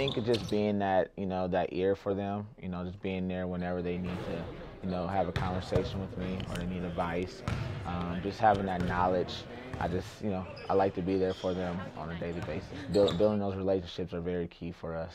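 No technical fault is audible anywhere in this audio.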